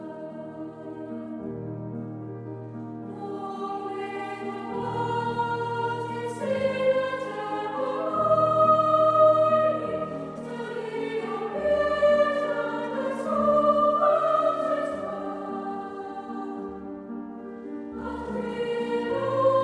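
No dropouts, clipping, distortion, level jumps or timing faults can be heard anywhere in the audio.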